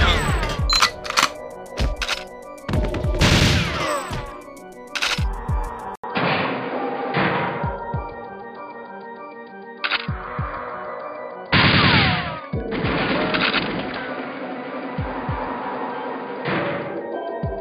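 The input most likely switched to a poorer device at 5.96 s, after an 80 ms gap. From then to the end nothing passes above 4.9 kHz, so the audio sounds dull and boxy, with faint new background noise and no real change in level.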